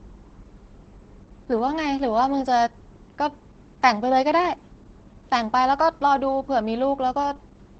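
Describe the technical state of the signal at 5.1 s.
At 5.1 s the speech carries Opus voice compression, present throughout the clip. The wideband SILK linear-prediction coder leaves nothing above about 8.7 kHz and codes the excitation coarsely, so the voice is plainly muffled and slightly hoarse, consistent with roughly 12 kbps.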